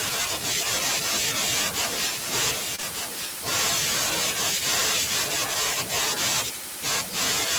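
From 1.79 to 5.34 s a doubled audio track runs: a dry, full-band copy trails by about a second, roughly 5 dB quieter, likely from a duplicated capture path. At 2.75–2.80 s and 2.80–2.84 s, short concealed packet loss replaces about 20 ms each time with extrapolated sound, heard as a brief smear.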